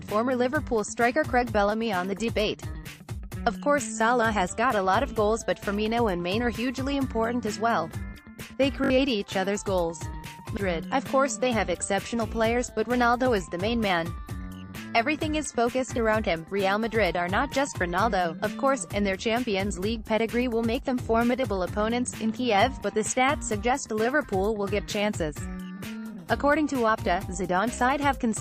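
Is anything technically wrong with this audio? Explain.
Yes. At 8.84 to 8.9 s there is a repeated buffer: fresh audio arrived late, so a 20 ms block replayed three extra times, giving a brief stutter-buzz that drops roughly 70 ms.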